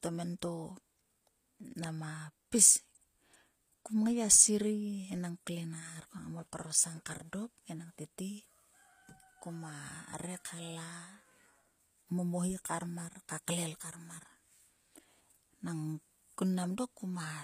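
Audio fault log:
Throughout, HE-AAC compression: the treble stays bright but sounds copied rather than real, with s sounds gritty and lispy and nothing above 15.5 kHz. That points to a low bitrate of about 24 kbps, likely with spectral band replication, unlike a plain low-pass, which would just sound dull.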